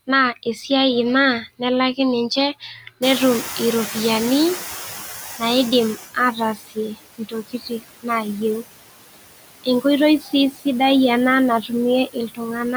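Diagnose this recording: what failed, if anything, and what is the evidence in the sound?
Call processing, noise suppressor artifacts: the noise suppressor pulls the steady background down by about 10 dB for the whole clip. The residue dips between phrases and swells under the speech.

Call processing, speech cut by the noise suppressor: quiet speech was classified as noise and attenuated with the background at 2.6–3.02, 6.55–7.01, 7.18–8.39, 10.2–10.33, 10.51–10.66, 11.62–11.71 and 12.06–12.4 s. Drops reach about 13 to 21 dB, deepest near 7.2–8.4 s, so those stretches sound swallowed.

Call processing, noise suppressor catching up: the room noise jumps by about 23 dB at roughly 3 s, to about 12 dB below the speech. The suppressor's estimate lags, so from 3.02 s the noise passes with less reduction, then sinks over 3 seconds to about 13 dB of reduction by 6.02 s.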